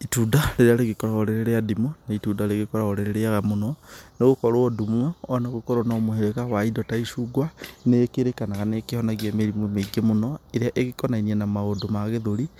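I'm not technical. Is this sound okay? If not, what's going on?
Yes, nothing in this recording stood out as a problem when listening to it.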